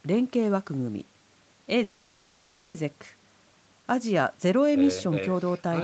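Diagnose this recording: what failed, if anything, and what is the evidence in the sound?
A call audio freeze at the network and jitter buffer stage, 1.83 to 2.76 s. The last sound drags on as a fading buzz, then the speech resumes unbroken. The likely cause is delayed packets leaving the jitter buffer empty.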